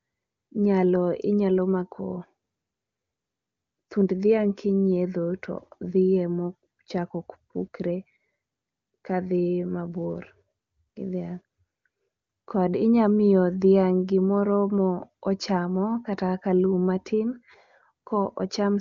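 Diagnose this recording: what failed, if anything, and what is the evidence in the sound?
Nothing has failed: the speech passes through an AMR wideband (HD Voice) stage at its top rate of 23.85 kbit/s, where any coding damage is faint at most, and no stage in the chain leaves an audible sign of trouble.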